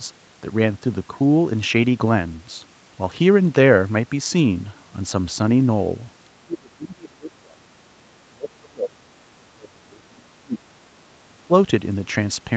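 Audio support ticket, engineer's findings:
Likely double-talk misjudged by echo canceller: near-end speech suppressed in double talk, 6.33–9.15 s, 9.45–10.95 s, 11.24–11.53 s; level dips up to about 30 dB. Band tops out at 8 kHz, consistent with Opus call path.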